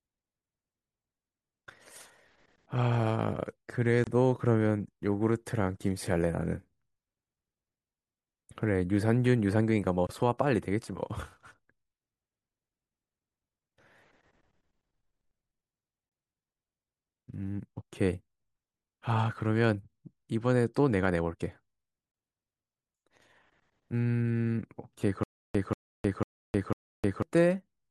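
At 4.04 s and 10.07 s, gaps at the joins of encoded pieces cut the speech for 29 ms and 24 ms. Six-second segments were joined with their encoder padding left in.

From 25.23 to 27.22 s comes a stutter with silent gaps. A 186 ms fragment repeats four times, with 311 ms of silence between. The stream likely stalled and retried.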